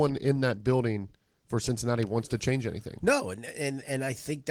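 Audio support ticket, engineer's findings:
No faults found in this speech clip. Opus voice compression is working as expected: light coding texture, full bandwidth reaching about 20 kHz, consistent with hybrid mode at roughly 20 kbps.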